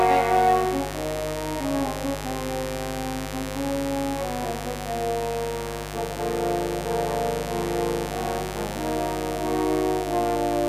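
A steady, raspy mains buzz runs under the audio from start to finish, loud at roughly 10 dB below the signal. Sharp switching spikes from a dimmer, rectifier or unshielded cable enter twice per 50 Hz cycle, so a spectrogram shows evenly spaced horizontal harmonic lines reaching several kilohertz.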